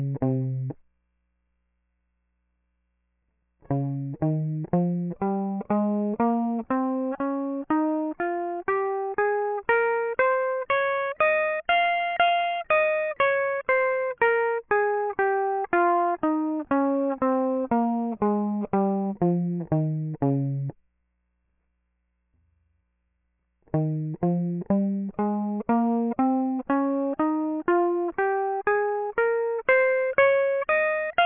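Aliasing runs through the whole piece of music. The band stops hard at 3 kHz, which fits a drop to a 6 kHz sample rate. No filter removed the higher content first. So everything above 3 kHz folds back below it, landing at wrong pitches unrelated to the music. These false tones sit about 25 dB under the music. Bright content turns gritty and metallic, and the spectrum runs right up to the band edge.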